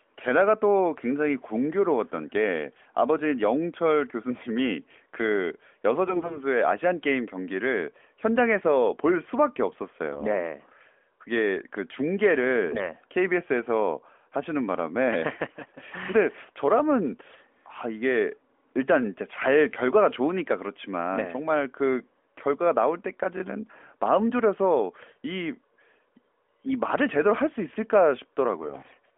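Narrowband speech over an AMR mobile link has three bursts of AMR bit errors, at 6.08–6.42 s, 25.02–25.20 s and 28.58–28.97 s. Corrupted low-priority bits misplace excitation pulses, so the voice turns hoarse and gargly while pitch and level hold, unlike frame loss, which leaves gaps or smeared repeats.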